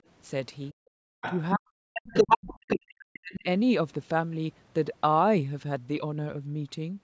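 At 0.71 to 0.79 s the speech dips sharply, by something like 40 dB, for about 70 ms. This is speech suppressed in double talk. It is likely that both ends were talking at once and the echo canceller, unable to tell the near talker from the loudspeaker echo, pulled the whole microphone signal down. The same thing returns at greater length from 1.53 to 2.82 s, where roughly a second of speech is cut in pieces and loses strength. It appears again from 3.2 to 3.46 s, about 300 ms of the talker sinking deeply while the far side is active.

Between 1.07 and 1.21 s the room sound itself drops out, by about 40 dB, for roughly 150 ms. This is background gated by the echo canceller. With the loudspeaker playing, the canceller clamped the microphone hard and then released it, so the ambience vanishes briefly and comes back.

The other side's voice leaking through follows in four spots. It likely comes from far-end playback that the canceller did not fully subtract. 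From 1.21 to 1.41 s it sits about 10 dB under the talker. From 1.95 to 2.53 s it is the strongest, roughly 5 dB above the near speech, landing inside the long suppression. From 2.69 to 2.94 s it is around 5 dB below. At 3.13 to 3.19 s only a faint scrap remains, near 25 dB down. The audio's top end stops at 8 kHz.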